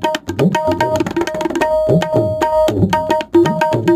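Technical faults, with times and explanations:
Throughout, crude rate conversion: samples were simply dropped, which fits a 48 kHz to 44.1 kHz change, leaving a faint, gritty, inharmonic fizz on louder, brighter moments.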